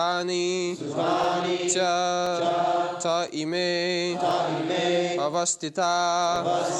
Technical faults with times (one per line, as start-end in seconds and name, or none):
0.21-6.36 periodic USB or driver dropouts